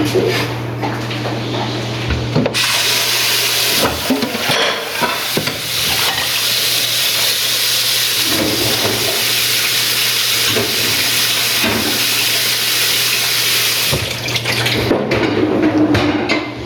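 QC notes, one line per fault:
Throughout, gain pumping: the gain swings by around 25 dB, so loud and quiet parts sit squashed together. Likely caused by input gain set far too high, with a fast limiter repeatedly clamping it.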